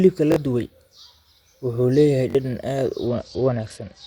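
A repeated buffer occurs at 0.32 to 0.36 s and again at 2.30 to 2.35 s, between "wuxuu leeyahay" and "dhadhan aad". New audio arrived late, so the same roughly 21 ms piece played two extra times with hard joins, giving a short stutter and dropping roughly 40 ms of speech. The length fits a 1024-sample buffer.

A Bluetooth SBC bit pool drop follows from 3.07 s to the end, just after "wuxuu leeyahay dhadhan aad". The congested link forced the encoder down to far fewer bits, around 77 kbps, consistent with a bit pool falling from 31 to 10. The upper sub-bands starve, so the treble dulls and gritty quantisation noise rises.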